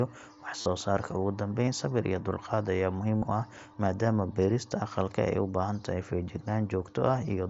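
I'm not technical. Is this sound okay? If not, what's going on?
No. There is concealed Bluetooth headset packet loss. Bits of sound between headset and phone went missing. The phone filled each gap by repeating a recent snippet. This makes short buzzy patches at 0.61–0.66 s, 1.65–1.68 s (just before "sabir iyo dulqaad") and 3.18–3.22 s.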